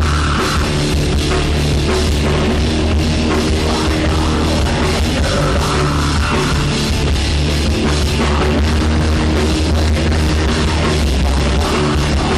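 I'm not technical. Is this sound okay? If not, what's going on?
No. Jumps occur at 0.64, 2.58, 4.36 and 8.41 seconds. At each, the sound skips ahead a tiny sliver, about a hundredth of a second, about twice that at 2.58. The likely cause is a dropped buffer (overrun). The computer fell behind and lost a chunk.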